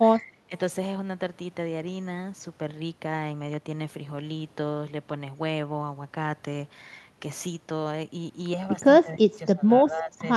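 Speech suppressed in double talk first appears from 0.19 to 0.52 s, where the talker's level sinks by roughly 15 dB, then returns at 9.04 to 9.66 s with a deeper dip near 20 dB, and again at 9.83 to 10.25 s at around 15 dB. Each time the speech dips, thins or fades in patches, the likely cause being an echo canceller that could not separate the near voice from the far side's echo during simultaneous talk and pulled the near voice down with it.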